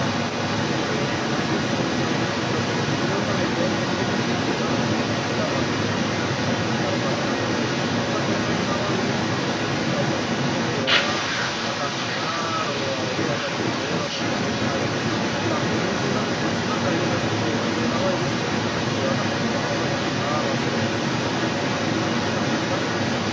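The other side's voice leaking through runs throughout, a second voice somewhat louder than the talker, likely from an echo canceller failing to remove loudspeaker playback.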